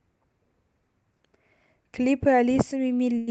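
At 3.18 s, right near the end, a short stall from a late packet holds the speech for about 91 ms, until 3.29 s. The receiver stretched the last sound while waiting, then resumed where it left off, so nothing is skipped. Unlike a dropout or lost packet, there is no gap or jump, just a sound held too long, and everything after it arrives 91 ms late. The call path also cuts off the band near 8 kHz.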